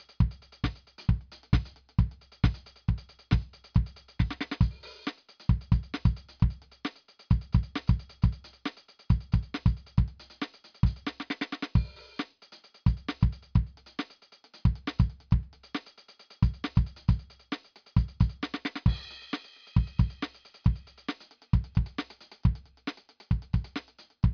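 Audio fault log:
No faults found: the music signal shows no technical problems at any point in the recording.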